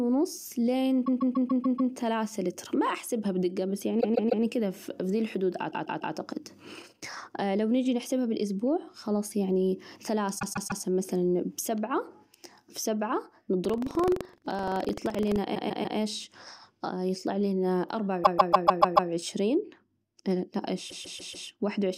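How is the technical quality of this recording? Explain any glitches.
The recording has two kinds of glitches. Repeated frames cause stutters, and buffer tearing causes a buzz.

Repeated frames occur at 1.05–1.91, 4.00–4.43, 5.70–6.13, 10.38–10.81, 15.54–15.97, 18.23–19.09 and 20.89–21.47 s. A 144 ms block replays three to six times, producing a stutter.

Buffer tearing runs from 13.61 to 15.38 s. Writer and reader overlap, splicing in roughly 100 ms-old audio. The result is a 23.4 Hz rattle, which fits a 2048-sample buffer.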